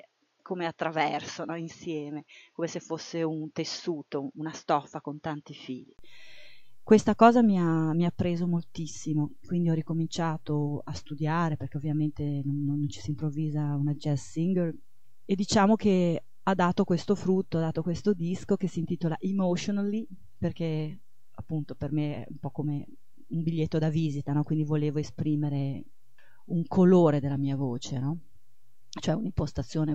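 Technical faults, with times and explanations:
0.0–5.99 s, input switched to a poorer device: the sound is dull and boxy with nothing above 6.8 kHz, a few dB quieter, and has its own faint hiss, likely from a lesser microphone. A 20 ms gap marks the switch. On a spectrogram there is a hard ceiling at 6.8 kHz that then lifts, and the waveform steps up in level.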